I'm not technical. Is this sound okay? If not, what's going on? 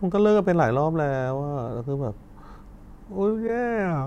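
No. There is a corrupt frame decoded at 3.47 to 3.49 s, near the end of the speech. The sound was stored in a compressed format made of short blocks, and one of those blocks was damaged before playback. The player decoded it anyway, so for a brief moment it produced sound at the wrong pitches. You hear this as a short chirp or blip, fairly loud, lasting only a couple of hundredths of a second.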